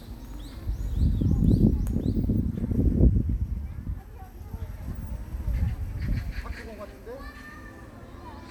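Nothing goes wrong anywhere in these everyday sounds, with no technical fault to point to at any moment.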